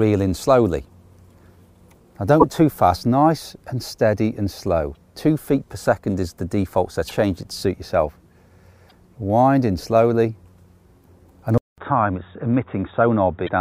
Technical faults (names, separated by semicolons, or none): damaged data in a compressed stream; input switched to a poorer device